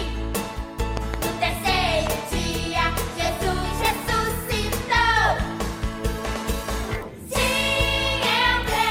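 A pair of sharp pops lands between 0.97 and 1.16 s, and a single one follows at 2.07 to 2.09 s. Each jumps roughly 15 dB above the surrounding level while the sound carries on underneath. These are loud pops, likely from a sudden voltage step or pulse, such as a switch, plug contact, static discharge or driver glitch, added to the signal and shaped by the circuitry that follows it.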